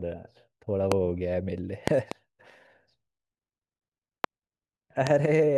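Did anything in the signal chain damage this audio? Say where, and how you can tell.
Yes, loud pops at 0.92–0.94, 4.24–4.26 and 5.07–5.09 s, plus a double across 1.88–2.14 s, about 20 dB over the speech. Likely voltage spikes in analogue wiring.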